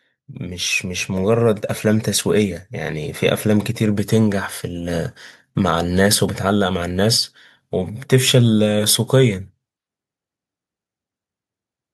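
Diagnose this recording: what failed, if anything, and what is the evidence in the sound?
The call processing stage failed through automatic gain rising. From 0.26 s to 2.34 s, the speech and the background noise swell together by about 7 dB. The control judged the input too quiet. It then raised its gain gradually over those two seconds.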